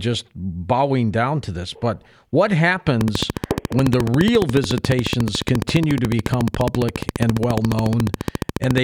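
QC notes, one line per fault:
3.01–8.79 s: train of clicks. A steady ticking sits over the speech at a regular pace of 14.2 clicks per second, around seventy in all, each with much the same shape. The clicks peak around 15 dB above the speech and carry on through the pauses, which shows they are added on top of the signal and are not part of it. The even spacing points to a periodic source, likely electrical interference from nearby equipment or a faulty connection or power supply.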